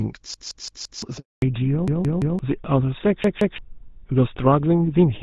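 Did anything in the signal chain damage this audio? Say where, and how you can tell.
Yes, at three stages. The driver or playback buffer repeated itself three times, with the same chunk of about 171 ms looping back-to-back with a hard join each time. That length fits a 4096-sample buffer. It happens from 0.34 to 1.02 s (four extra plays), 1.88 to 2.39 s (three), and 3.24 to 3.58 s (two). This is a repeated buffer: fresh audio didn't arrive in time, so the device replayed the last block, and roughly 0.7 s, half a second, and 0.3 s of real audio got lost.

On the network side there's a handover gap from 1.18 to 1.42 s, 240 ms of dead air. The sound drops out within a few tens of milliseconds and stays silent until the new link comes up, which is what you get when the call switches networks and no speech frames arrive during the changeover. Whatever was said in that window is simply gone. 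It isn't a dropout you can recover from downstream.

Right after that gap, at 1.42 s, there's a fallback to narrowband at the codec stage that lasts to the end. Before it, the HD Voice (AMR-WB) path sounds clear, pointing to around 12.65 kbit/s with only light coding roughness. After the switch, nothing above 4 kHz survives, and the sound gets duller and rougher. That points to the handover landing the call on GSM full rate instead of wideband.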